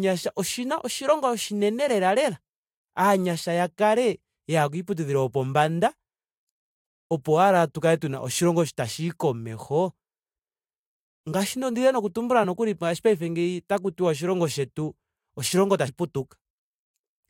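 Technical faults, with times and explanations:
12.43–12.45 s and 15.87 s: compressed frames skipped. Speech jumps ahead, about 20 ms at the first point and about 70 ms at the second, as whole frames went unplayed. Each join shows as a brief waveform discontinuity.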